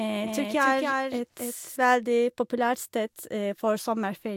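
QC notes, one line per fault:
0.00–1.76 s, doubled audio track: a second full-band copy of the speech, already present at the start, trails by around 300 ms at about 5 dB down, then stops abruptly. Unlike echo, it has one undecaying, roomless repeat, likely from a slower second capture path.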